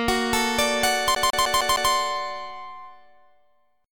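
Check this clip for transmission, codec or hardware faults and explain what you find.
One fault is present: CD stuck on one turn, from 1.15 to 1.92 s. A scratch keeps knocking the laser back one track at the same point each rotation, so a 0.15 s slice of audio plays five times, with a brief mute at every jump. The result is a fast, even skipping-CD stutter.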